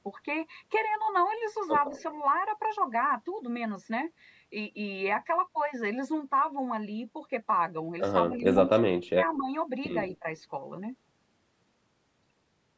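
Around 1.97 to 2.03 s there's a brief echo leak: a faint copy of the speech comes back about 164 ms late, roughly 30 dB down. That's likely the far end's echo canceller letting a scrap of loudspeaker pickup slip through.

Later, the speech gets pulled down in three places: 8.29 to 8.45 s (a mild dip of around 10 dB), 8.93 to 9.5 s (a deep cut of about 30 dB), and 10.1 to 10.26 s (about 15 dB). That's likely speech suppressed in double talk, where the canceller ducked everything while both sides overlapped.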